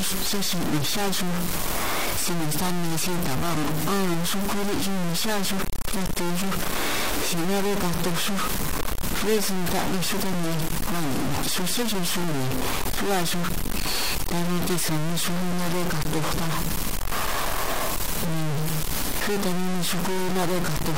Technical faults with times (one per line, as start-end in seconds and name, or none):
0.00-20.98 low bit depth without dither